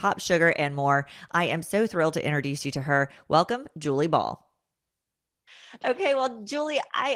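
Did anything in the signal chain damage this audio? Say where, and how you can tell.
No, nothing in the chain audibly damaged this speech, and there's no stage or time to point to.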